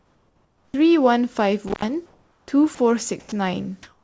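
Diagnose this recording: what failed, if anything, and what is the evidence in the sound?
Comfort noise in place of the background at 0.00–0.74 s, 2.06–2.48 s and 3.83–4.04 s. In call processing, the real background becomes steady, featureless hiss, about 9 dB quieter, about 3 dB quieter, then about 5 dB louder. This is likely discontinuous transmission filling the pauses.

Onset clipped by the voice detector at 0.69–0.74 s. The speech starts abruptly, missing about 50 ms of its soft beginning. The likely cause is a slow detector, with comfort noise played instead.

Intermittent contact at 1.68–1.85 s, in the analogue wiring. The signal opens for about 105 ms with crackle at both edges, which points to a loose cable or plug.

Sound dropped by the voice detector at 2.75–2.78 s and 3.20–3.32 s. Speech briefly gives way to steady noise for 30 ms and then 120 ms, likely because the detector misread part of the sound as background. 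This happens within a G.722 call path, whose band stops at 8 kHz.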